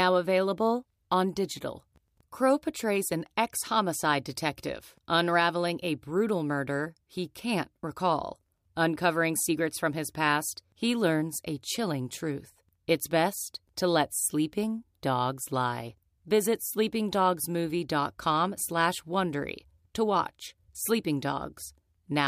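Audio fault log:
No audible faults found in the speech at any point.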